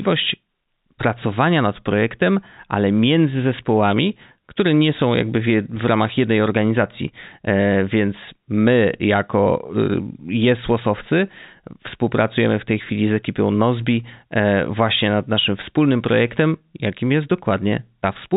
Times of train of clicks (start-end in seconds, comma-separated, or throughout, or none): none